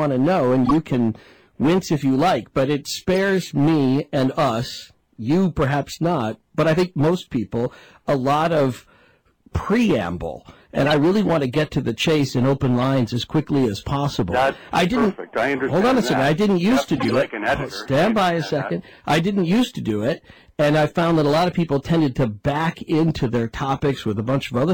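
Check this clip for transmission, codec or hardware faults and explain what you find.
Six short bursts from a corrupt frame decoded fault occur at 0.65–0.71 s, 2.01 s, 3.13–3.16 s, 10.86–10.92 s, 12.81 s and 16.96–17.14 s. Each time, damaged compressed frames were played anyway, and misread gains and codes scattered energy into the wrong frequencies for a few frames. The result is chirps, squeaks or noise bursts, loudest near 0.65 s and faintest at 2.01 s.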